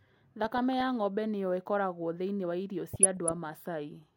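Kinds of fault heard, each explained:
DAB burbling: short noise blips flicker over the speech twice because bit errors from weak reception slip past error correction and knock single MP2 sub-bands off level.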